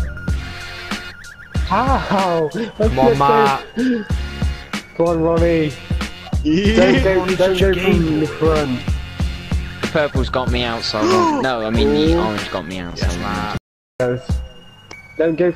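At 13.57 s the sound cuts off abruptly and stays out until 14.00 s. This is an audio dropout to silence, lasting about 425 ms. The gap is dead silence, with no room tone or background underneath. Whatever was happening in that stretch is simply missing. The sound resumes mid-flow rather than fading back. The likely cause is a brief loss of the input, such as a dropped link or momentary mute, while recording continued writing silence.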